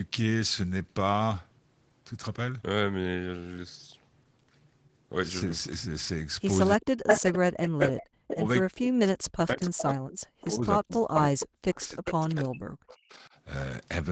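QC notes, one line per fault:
6.75–13.29 s, speech suppressed in double talk: the echo canceller likely could not separate the near talker from loudspeaker echo while both sides spoke, so it turned both down. The voice dips and breaks up for about five seconds in total, dropping by as much as about 40 dB.
6.84–8.36, 9.60–9.82, 10.41–10.45, 10.92–11.01, 11.40–11.44, 11.80–12.12 and 12.90–13.15 s, echo leak: the far end's echo canceller likely let loudspeaker pickup through, so a copy of the voice returns about 335 to 353 ms late. The first burst sits about 5 dB above the speech, and the later scraps sit about 10 to 25 dB below it.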